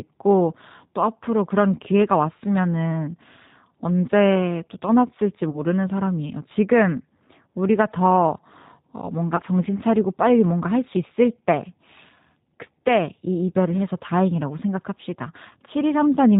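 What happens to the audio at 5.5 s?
From 5.50 to 5.59 s there is VoIP packet loss concealed by the speech codec. Packets went missing, and about 30 ms of audio had to be filled in, which fits three lost 10 ms frames. The decoder repeated its last pitch and vocal tract filter, cutting the gain each frame. The gap becomes a stretched buzzy tone or coloured noise that fades. Because each frame builds on the previous one, the voice stays weak or distorted for a short while after packets resume.

Underneath, and through the whole clip, is the G.729 codec, consistent with G.729A at 8 kbit/s. It rebuilds speech from a filter, a pitch predictor and a few pulses per frame. Nothing above 4 kHz survives, and the rough, synthetic coding damage is plainly audible.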